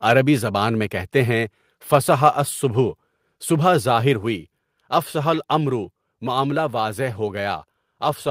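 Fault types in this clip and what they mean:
Microphone volume stepped down: at 4.14 s the speech and background fall together by about 3 dB in a single step, just before "ہوئی اَفْصَحَ", likely the call software cutting the device's input volume after judging the microphone too hot.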